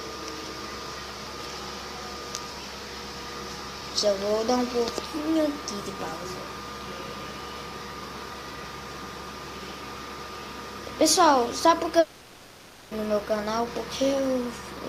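From 11.99 s to 12.94 s the audio gives way to a fading buzz with no true silence, then resumes further on with the lost stretch skipped. This long network dropout likely comes from packets not arriving. Unlike a brief packet-loss click, the fill audibly decays.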